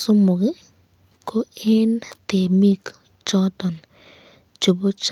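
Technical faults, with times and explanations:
2.71–2.77 s and 3.73–3.83 s, lost packet rebuilt from error correction: a 40 ms stretch, then a 60 ms one, turn briefly rougher and noisier. There is no dropout. This fits two, then three, lost 20 ms packets, each replaced by the low-bitrate backup copy carried in the following packet. The real content continues, only coarsened, which sets it apart from a silent gap or a concealment that repeats or smears the previous sound.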